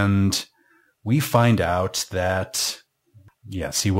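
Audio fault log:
throughout, crude rate conversion: A gritty, inharmonic fizz rides on the speech, growing on louder and brighter sounds, with a distortion layer only about 20 dB below the voice. The pattern fits a change from 44.1 kHz to 48 kHz done by repeating the nearest sample rather than filtering. Those repeats recur in a fixed cycle set by the two rates, producing tones unrelated to the speech that follow its level and high content.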